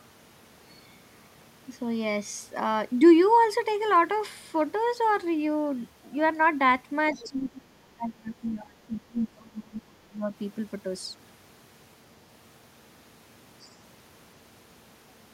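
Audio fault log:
7.13–7.28 s and 13.61–13.74 s, other side's voice leaking through: two brief scraps of a second voice sit under the main speech, each well under a quarter of a second. The first is about 20 dB below the talker and the second fainter, about 30 dB down. These are most likely residual loudspeaker echo that the echo canceller failed to subtract from the microphone signal, so fragments of the far end pass through.
7.24–10.34 s, speech suppressed in double talk: starting just as the first leak fades, the talker's level pulls down for roughly 3 s, with the deepest dip about 25 dB below normal. The speech sounds ducked rather than cleanly continuous. The likely cause is both parties speaking at once, so the echo canceller could not tell near-end speech from echo and attenuated everything on the send path.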